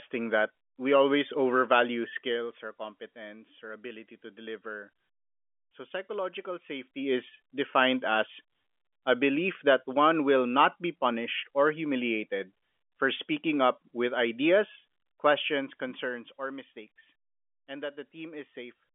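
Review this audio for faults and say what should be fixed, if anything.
Nothing here needs fixing; no faults were found.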